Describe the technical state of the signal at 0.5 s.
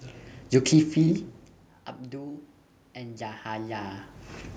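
At 0.5 s the signal is intact, with only the room's background noise under the speech.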